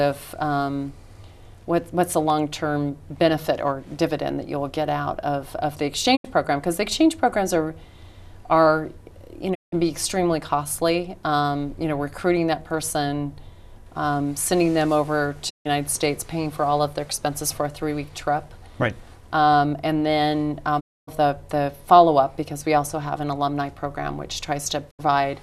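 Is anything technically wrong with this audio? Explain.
Yes. There are digital broadcast dropouts at 6.15–6.26, 9.53–9.74, 15.49–15.67, 20.79–21.09 and 24.89–25.01 s. Each time the receiver muted on corrupt or missing frames, fading to silence over 20 ms, then resumed with 72–264 ms of programme lost.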